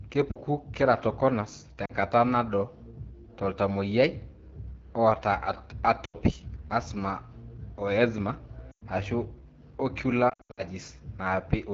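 The whole clip carries AMR wideband (HD Voice) codec coding, and the raspy, rough speech points to one of its lowest rates, around 8.85 kbit/s. Lost AMR speech frames cause short dips at 0.31, 1.85 and 6.06 s, and another right after "o eczema" at 8.71 s. Between 10.29 and 10.63 s the losses are scattered, so the sound breaks up and drops to near silence in its longest 80 ms run as the decoder fades out its last good data.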